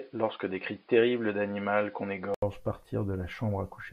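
From 0.00 to 2.42 s the speech is dull, with nothing above 5.1 kHz and faint extra noise, likely an input switched to a poorer device; an 80 ms gap marks the switch back.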